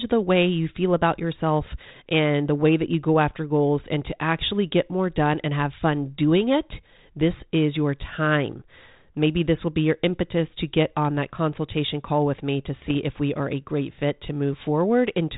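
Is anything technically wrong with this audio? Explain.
Yes, there's a short burst of bit errors on an ADPCM link from 12.82 to 12.95 s, right after "call with me to" and before "if we are a". The sound travels over what sounds like 32 kbit/s G.726 ADPCM, and a small fraction of a percent of the bits got flipped there. Each bad bit throws off the decoder's step size and prediction, so the damage rings on briefly, giving pops, a rough crackly patch and quick jumps in level.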